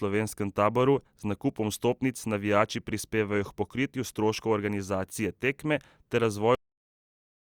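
At about 6.55 s the speech just stops mid-sound, a cut-off end. The final stretch of buffers never got written or played, so instead of decaying naturally it drops straight into digital silence for the remaining second or so of the clip.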